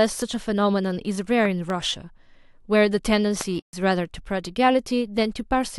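At 1.45 s a sharp double crack cuts through the speech, two pops within about a quarter of a second ending by 1.72 s. A single, shorter pop follows at 3.41 to 3.43 s. Each peaks roughly 10 dB above the speech, which carries on underneath. These are loud pops, likely caused by sudden voltage steps from a switch, plug contact, static discharge or driver glitch. The later circuitry turned each step into a brief thump-like pulse.

Immediately after, from 3.60 to 3.73 s, the sound drops out completely for about 131 ms and then resumes. This is a playback stall, likely caused by the player's buffer running empty or its audio thread being held up, so no samples reached the output until it recovered.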